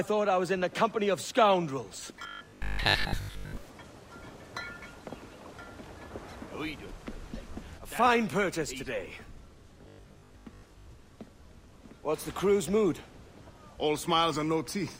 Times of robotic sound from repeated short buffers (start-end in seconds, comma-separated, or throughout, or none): 2.23-3.57, 9.82-10.90